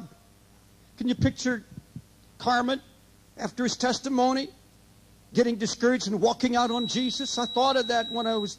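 From 6.59 s to the end, a feedback whistle sits at 3.9 kHz, roughly 10 dB under the sound, steady in pitch but swelling and fading slowly in level, likely from a loudspeaker-to-microphone loop held at the edge of feedback.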